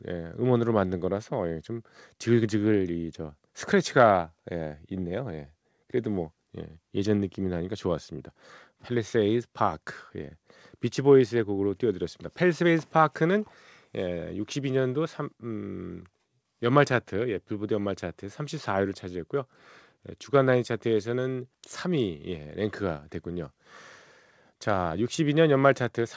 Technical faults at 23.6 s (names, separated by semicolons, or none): none